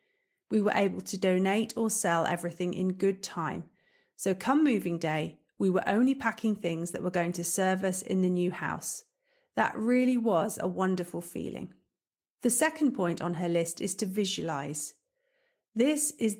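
Listening closely to the speech, nothing stood out as a technical fault at any point.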